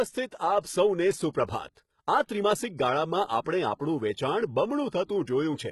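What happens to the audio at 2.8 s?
At 2.8 s, as throughout, the treble sounds gritty and metallic and stops at 11.8 kHz. This is likely heavy HE-AAC compression, fitting about 16 kbps: the highs are copied up from lower bands, not simply dulled as a low-pass filter would leave them.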